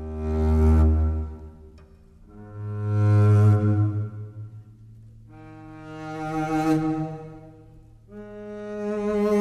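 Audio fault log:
No faults heard anywhere in the audio.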